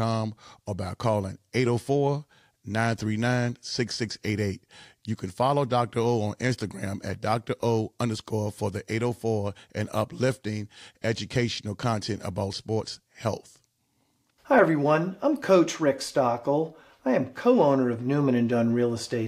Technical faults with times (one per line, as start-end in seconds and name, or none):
none